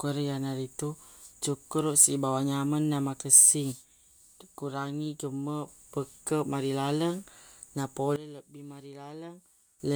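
At 3.72 s the speech and its background noise drop together by about 6 dB, recovering at 5.68 s. At 8.16 s they fall by about 16 dB until 9.8 s. Each is a sudden gain jump, likely an unramped digital gain change.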